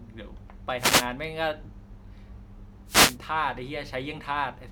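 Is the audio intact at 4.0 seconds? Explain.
Yes, at 4.0 s the speech plays through intact, with no dropout, click, distortion or other audible fault at that moment.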